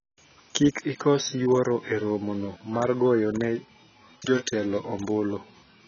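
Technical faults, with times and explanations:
Throughout, AAC compression: the speech sounds dull and smeared, with nothing above 6.8 kHz and a fizzy, warbling edge on sibilants and held sounds. The likely cause is heavy AAC-LC coding at a low bitrate, which fits about 22 kbps, discarding high bands and coarsely quantising the rest.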